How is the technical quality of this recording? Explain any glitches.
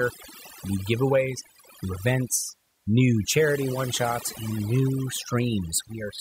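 The recording suffers from overdone noise removal, present throughout the speech. An aggressive reduction stage has cut bands near the noise estimate, leaving a lowered background that breaks up into twinkling specks.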